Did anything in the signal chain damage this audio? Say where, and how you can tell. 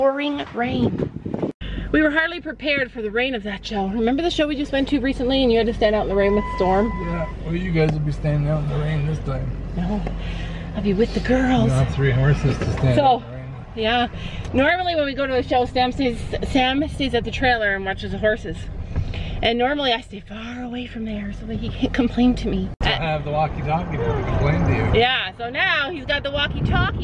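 No, nothing along the chain seems to have touched this one, so there's no stage to point a finger at.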